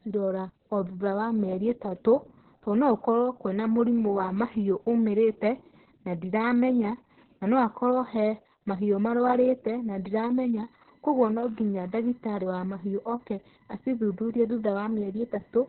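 From start to finish the speech carries heavy Opus voice compression. It's running in SILK-only mode with the band squeezed down to narrowband, so nothing much survives above about 4 kHz. That's why it sounds muffled and boxy. The excitation is coded so coarsely that voices turn hoarse and a bit robotic, which points to a bitrate around 6 kbps with long frames, likely 60 ms.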